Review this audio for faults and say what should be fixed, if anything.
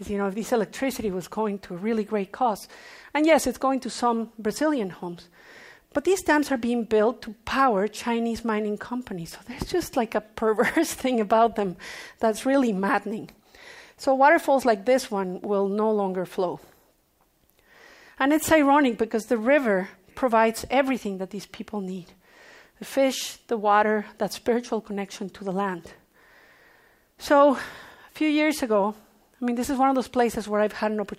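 Nothing here needs fixing, because the signal holds steady and continuous throughout, with no technical fault to be heard anywhere in the recording.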